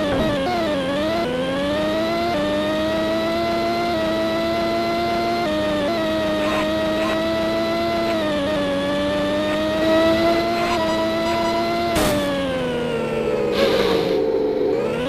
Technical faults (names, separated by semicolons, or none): none